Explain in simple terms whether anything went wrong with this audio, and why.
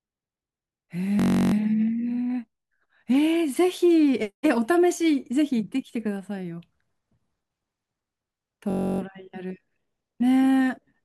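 Twice the speech stops and is replaced by a low, steady buzz: from 1.2 to 1.54 s and from 8.7 to 9.0 s. This is a system hang loop. The computer briefly froze while the sound hardware kept replaying the same 21 ms scrap of audio, 16 and then 14 times, which fits a 1024-sample buffer. Unlike a dropout, there is no silence. Unlike a stutter or echo, the repeats are so short and exact that they blur into a buzz at about 47 Hz.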